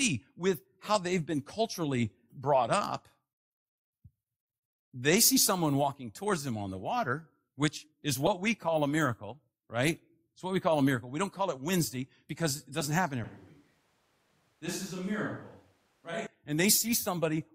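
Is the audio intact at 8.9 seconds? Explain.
Yes, the speech at 8.9 seconds plays through intact, with no dropout, click, distortion or other fault at that moment.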